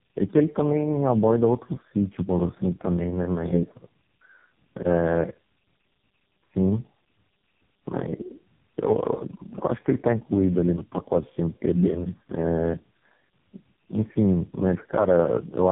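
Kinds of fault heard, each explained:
Tandem speech coding: the speech sounds rough, muffled and warbly throughout, with nothing above 3.8 kHz. It passed through three low-rate speech coders in a row, ending in AMR-NB at 5.9 kbit/s, each re-coding the last one's already degraded output, so the damage compounds.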